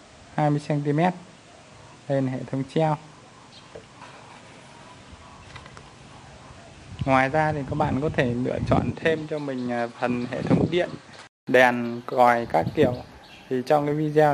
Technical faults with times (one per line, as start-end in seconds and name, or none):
0.00-11.47 input switched to a poorer device